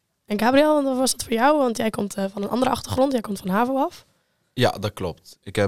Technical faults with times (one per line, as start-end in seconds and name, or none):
none